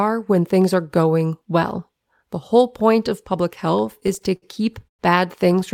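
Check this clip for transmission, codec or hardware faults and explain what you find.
One transmission fault is present: repeated stalls (stutter) between 3.81 and 5.01 s. Packets reached the receiver late or too slowly, so its jitter buffer kept running dry, eleven times in this stretch. Each time it stretched the last sound, fading it during the longer waits, the longest about 110 ms, filling roughly a fifth of that span. The speech drags and stutters rather than dropping out. Unlike packet loss, none of the audio is missing.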